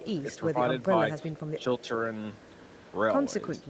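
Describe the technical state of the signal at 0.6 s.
Right around 0.6 s the speech has just come out of a brief dip, from 0.54 to 0.59 s. This is speech suppressed in double talk. Its likely cause is an echo canceller that heard both ends at once. It could not tell the near talker from loudspeaker echo, so it turned the signal down. The dip is shallow, about 5 dB, and lasts roughly 50 ms. It sounds like a quick pull-back in level. The band still ends near 8 kHz, as the call codec leaves it.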